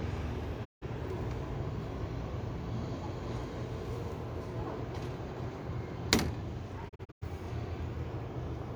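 At 0.64 s a digital broadcast dropout occurs: the receiver stops getting valid frames and mutes, so the sound fades out over about 20 ms and stays silent until 0.84 s, roughly 160 ms missing, which fits five lost frames. From 6.88 to 7.24 s a second dropout breaks up rather than holding: about 192 ms goes missing in several short holes across 320 ms, the longest about 96 ms. Whatever was broadcast in those gaps never returns.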